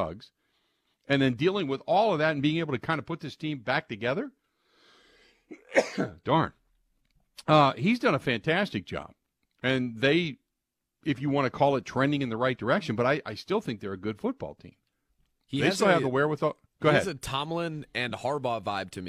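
No technical faults can be heard in this speech recording.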